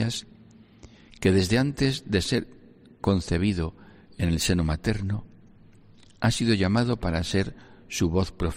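Nothing in the audio points to a technical fault at any point.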